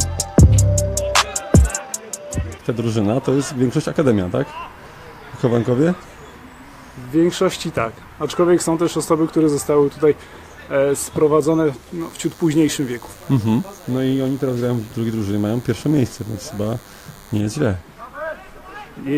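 A DECT cordless phone or base station close to the recording chain is transmitting its short radio bursts every 10 ms, and the audio circuitry rectifies them into the signal path. From 12.00 s to 17.41 s this produces DECT cordless phone buzz: a thin, steady buzz repeating at 100 Hz, rich in harmonics, sitting around 25 dB below the main sound. It stays present for the whole stretch.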